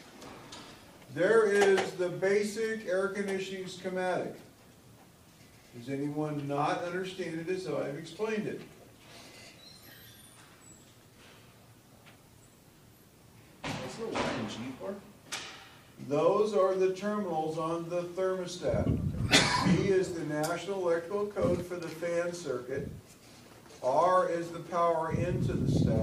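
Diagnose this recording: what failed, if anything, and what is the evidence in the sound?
No fault can be heard.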